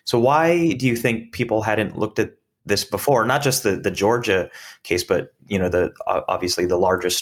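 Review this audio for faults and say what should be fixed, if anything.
From 3.16 to 4.66 s, after "hadn't looked at this" and before "case but you know", a faint hiss and roughness rides on the speech, strongest on loud, bright sounds. This is sample clock jitter: the converter's clock wanders by under a microsecond, so samples land early or late, leaving an error about 45 dB below the signal. Fix it by clocking the converter from a clean, stable low-jitter source.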